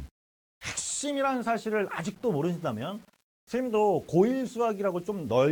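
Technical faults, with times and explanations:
Throughout: low bit depth without dither. The audio was likely reduced to 8 bits and rounded with no dither, so the rounding error tracks the signal. It sits only about 35 dB below the sound, and quiet passages turn grainy and gritty, with the distortion shifting as the sound changes.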